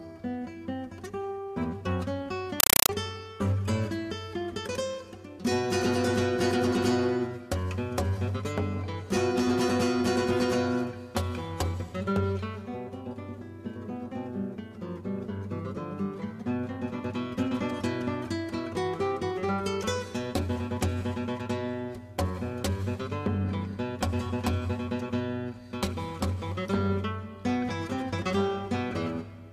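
Compressed stream played as audio from 2.6 to 2.89 s: loud chattering static of 5.33 ms noise bursts repeating at 31.25 Hz, which fits undecoded AC-3 data passed through as samples.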